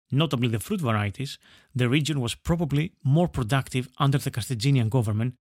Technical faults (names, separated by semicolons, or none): none